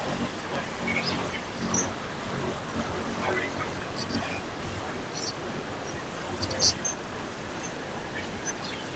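From start to finish the speech carries a steady buzz at about 46.9 Hz and runs 1.12 times too fast while keeping close to its normal pitch. This is a block size mismatch (truncated): one stage writes longer blocks than the next reads, so the tail of each block is discarded. The buzz rate fits blocks read 1024 samples at a time.

Later, faint repeats trail the speech from 6.95 to 7.1 s, 7.34 to 7.38 s and 8.9 to 8.94 s. Each repeat comes 158 ms behind the original and sits well below it in level. This is likely an echo leak: a loudspeaker on the far side fed the microphone, and the echo canceller let some of it back into the call.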